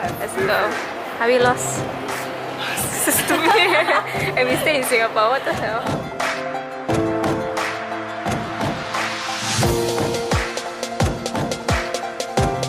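At 3.5 s and again at 8.47 s there is a repeated buffer: new audio arrived late, so the device replayed its last block once with a hard join. The repeat length fits a 10 ms buffer, short enough to come across as a click or brief buzz, with around ten milliseconds of audio lost each time.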